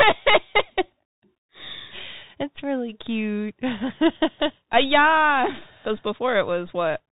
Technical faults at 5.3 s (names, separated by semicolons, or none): Bluetooth CVSD headset codec